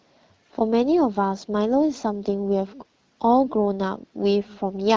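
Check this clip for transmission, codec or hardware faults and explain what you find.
No transmission, codec or hardware faults turn up in this speech clip. It sounds like it has passed through an AMR wideband (HD Voice) link at around 12.65 kbit/s, which leaves the speech clear, with only the light coloration that rate brings and a top end that tapers off near 7 kHz.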